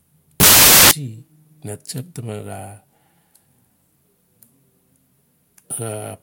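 Samples built from the wrong bytes, 0.40 to 0.91 s: misassembled bytes turn each sample's fast-changing low bits into its largest part, producing loud, harsh broadband noise over the speech.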